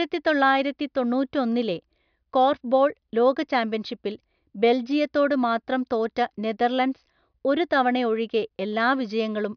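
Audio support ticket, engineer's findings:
Speech signal shows no audible technical faults anywhere in the recording.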